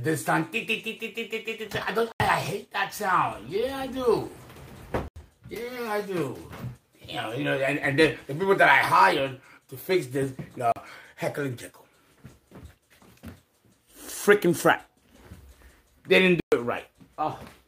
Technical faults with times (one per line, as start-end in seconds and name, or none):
2.12-2.20 block of digital silence
5.08-5.16 block of digital silence
10.72-10.76 block of digital silence
16.40-16.52 block of digital silence